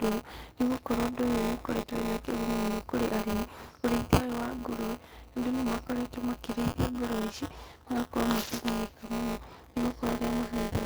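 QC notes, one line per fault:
Throughout: buffer tearing. A steady robotic buzz at 200 Hz rides on the speech and drops away in pauses. The writer and reader of the ring buffer have slipped, so roughly a tenth of each 5 ms period replays audio about 20 ms old, with hard joins on both sides.
6.71 to 6.75 s: short concealed packet loss. A brief smear lasting 20 ms where audio never arrived in time. The receiver extended the preceding sound to cover the hole, then blended back into real audio, leaving a small wobble rather than silence.
8.43 to 8.65 s: lost packet rebuilt from error correction. About 120 ms sound rougher and noisier but have no gap, which points to around six lost packets. Each was replaced by the low-bitrate Opus in-band FEC copy carried in the following packet.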